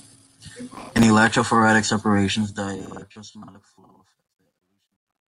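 From 0.74 to 1.03 s, processor overload crackle: missed deadlines replay snippets of old audio, fitting buffers of around 10 ms, heard as gritty tearing and seen as dense vertical broadband streaks.

From 2.22 s, the fade-out shows truncation distortion, consistent with about 12-bit resolution and no dither. It is worst from 3.68 to 5.28 s, with the waveform turning to square steps and the spectrogram filling with harmonic hash.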